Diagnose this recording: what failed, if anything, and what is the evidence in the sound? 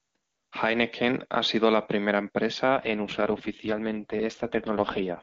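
AMR rate drop, network stage, 2.74 to 5.22 s, after "ha sido la primera": a weak link forced the codec down, turning speech raspy and synthetic, consistent with roughly 6.6 kbit/s, with no gap or bandwidth loss.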